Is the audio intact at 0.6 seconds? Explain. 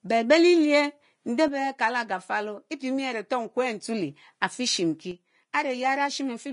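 No. At 0.6 seconds the speech carries the same damage heard across the entire clip, most likely from Vorbis compression at a low setting, consistent with a bitrate near 32 kbps. Nothing is present above 10.5 kHz, so the top octave is dulled. Below that cut-off the treble has been quantised so coarsely that its fine detail turns into hiss-like noise of similar energy, leaving consonants grainy, tones roughened and attacks smeared.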